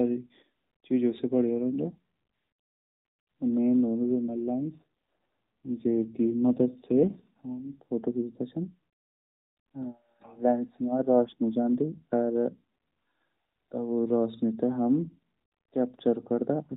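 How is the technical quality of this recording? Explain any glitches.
It's narrowband mobile speech, with the AMR codec capping everything at 4 kHz and adding only light coding roughness, plus one glitch. From 4.06 to 7.80 s there's an AMR rate drop. The network pushed the codec to fewer bits, which fits a fall from 12.2 to 5.9 kbps, so the voice turns buzzier and more synthetic. There's no gap or band change, and quality recovers afterwards.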